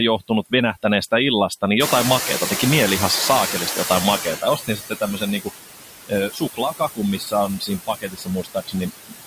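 Noise suppressor artifacts run through the whole speech clip. The suppressor pulls down the bands it judges to be steady noise by about 17 dB, frame by frame, so the background dips between phrases and comes back up beneath them. Unlike plain room noise, this residue pumps with the speech rather than sitting at a constant level.

From 1.79 s the noise suppressor is catching up. The room noise jumps by about 20 dB around 2 s and then sits only about 7 dB below the speech. The suppressor's noise estimate lags behind the jump, so the louder background first comes through with less reduction. Over the next 2.61 s, until 4.4 s, it sinks by about 14 dB as the estimate adapts. The giveaway is a slow downward glide rather than a sudden drop.

The suppressor also cuts speech. Between 4.23 s and 5.24 s, roughly 0.4 s of the speech is turned down by as much as about 17 dB. A brief cut of around a tenth of a second at 5.40 to 5.51 s goes down by about 21 dB. 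From 6.07 s to 9.21 s, about a second and a half in total is lowered by up to about 22 dB. The affected speech sounds swallowed or faint. Unlike a dropout, the sound fades instead of stopping abruptly, and the background is pulled down along with it.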